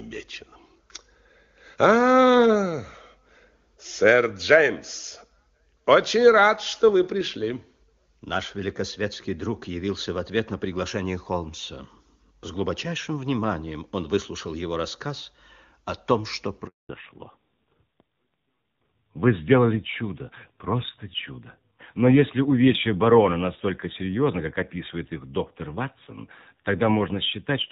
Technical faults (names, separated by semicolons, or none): handover gap; fallback to narrowband